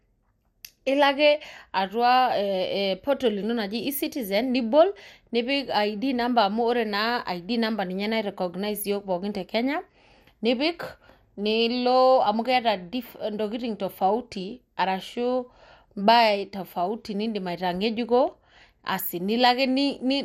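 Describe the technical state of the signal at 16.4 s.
At 16.4 s, as throughout, the speech carries plainly audible MP2 compression damage, likely from a low bitrate of around 80 kbps: nothing above 16.7 kHz, with dull, gurgling, granular distortion.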